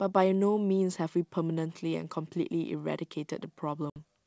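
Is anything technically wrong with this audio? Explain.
Yes. Packet loss on an ADPCM call hits the speech between 3.90 and 3.98 s. About 60 ms of audio, a few packets' worth, never arrived and was filled with silence. The decoder's adaptive predictor and step size drifted away from the sender's, so after the abrupt hole the speech comes back with brief slight distortion that fades over the next few tens of milliseconds. Outside this gap the G.722 wideband coding at 64 kbit/s adds little or no audible damage.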